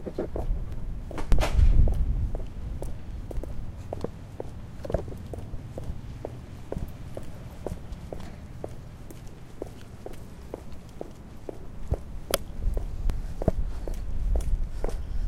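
This is a recording of everyday sounds with compressed frames skipped in eight places: 0.72, 1.32, 3.37, 5.59, 8.23, 9.26, 11.99 and 13.10 s. At each one the audio jumps ahead by somewhere between 0.3 s and around 0.7 s, which fits whole blocks of roughly 85 ms going missing or being rejected by the decoder.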